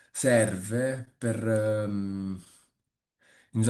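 All through the clip the speech carries faint, uneven timing hiccups: tiny holds that recur at irregular spacing rather than on a beat. This is clock drift between sender and receiver. The sending clock runs slow, by something like one and a half percent, so the jitter buffer keeps draining. The receiver keeps patching it by repeating short slivers of sound.

At 1.05 to 1.09 s there is a separate hitch: the sound hangs a touch too long, with a slight buzz or dip, and then carries on from exactly where it stopped. This is a short stall from a late packet. The packet missed its slot, the buffer emptied, and the receiver stretched the last sound by about 16 ms until it arrived. Nothing is lost, but playback now runs 16 ms later.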